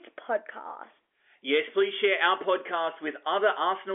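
The speech comes through an ordinary telephone channel, its content confined to the 300 Hz to 3.4 kHz line band with nothing above about 3.6 kHz, which fits G.711 mu-law telephone coding at 64 kbps, and no fault can be heard anywhere in it.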